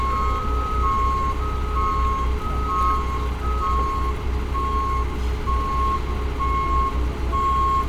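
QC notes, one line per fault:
No faults were found in this clip of sounds. There is nothing to log for it.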